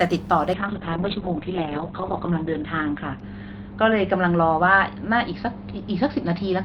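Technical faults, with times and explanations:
0.54 s to end, call bitrate drop: audio narrows from 20 kHz to 4 kHz and turns watery, as if near 6 kbps. Unlike plain filtering, coarse coding artefacts appear, worst for 1.76 s.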